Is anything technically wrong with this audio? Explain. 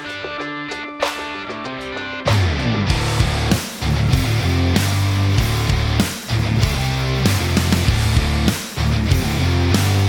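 Yes. There is an overlap between stream segments at 4.09 s, near the boundary where one chunk of the stream hands over to the next, which fits segments of about 2 seconds. The timestamps of the two neighbouring segments claim the same stretch of time, so the player trims the apparent duplicate even though that audio was never doubled. About 5 ms of real sound is lost and the waveform jumps across the gap, heard as a single brief click or tiny skip.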